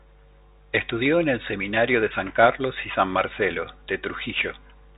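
Bluetooth CVSD headset codec, throughout the speech: nothing above 3.8 kHz, scratchy s sounds and granular hiss, as one-bit adaptive delta steps lag behind fast high sounds.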